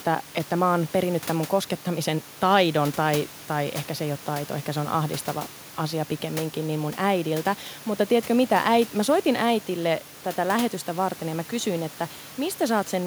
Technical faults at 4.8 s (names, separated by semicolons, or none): none